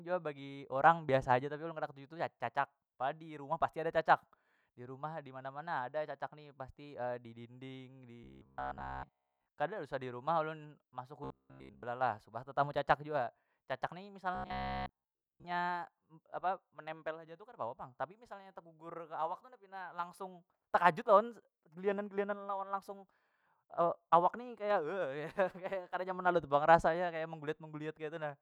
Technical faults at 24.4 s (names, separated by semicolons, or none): none